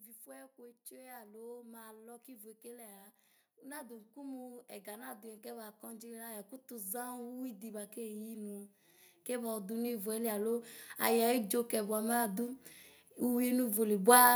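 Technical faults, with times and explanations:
0.23 to 8.72 s and 9.25 to 13.5 s, automatic gain rising. The level climbs slowly across each span. The first rise adds about 17 dB. The second adds about 8 dB. The gain control judged the input too quiet and kept turning it up. It scales everything it receives. So the speech and the background noise swell together. The rise is gradual, never a sudden jump.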